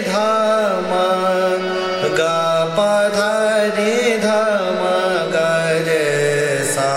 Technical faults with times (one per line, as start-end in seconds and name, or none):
4.44-6.97 feedback whistle